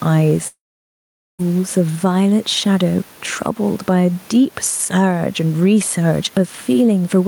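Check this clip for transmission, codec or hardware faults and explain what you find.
Two faults stand out: a long network dropout near the start and gain pumping across the whole speech recording.

Long network dropout, 0.47 to 1.41 s: the likely cause is that packets stopped arriving for about 0.92 s. The receiver briefly extends the last sound as a fading buzz or hiss, then about 0.82 s of silence follows before speech resumes further on, with that stretch simply missing.

Gain pumping, throughout: the microphone gain is likely set far too high, and a fast limiter or compressor keeps clamping it down on loud syllables. The level swings by roughly 5 dB, with the room noise about 34 dB below the speech, leaving the speech squashed.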